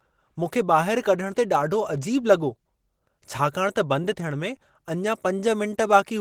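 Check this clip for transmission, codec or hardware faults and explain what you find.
One codec fault runs through the whole recording.

Opus compression, throughout: the speech sounds hoarse and muffled, with a grainy roughness and plainly audible codec damage, even though content reaches up to about 22 kHz. That texture likely comes from an Opus encoder in its hybrid mode at a low rate, around 16 kbps. With so few bits, the encoder models the lower band as speech and fills the upper bands with folded or noise-like energy rather than leaving them empty.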